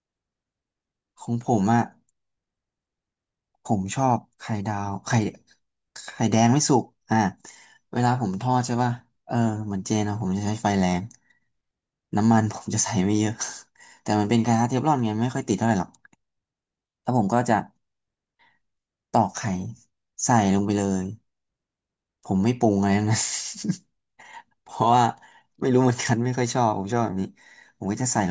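No technical faults can be heard anywhere in this recording.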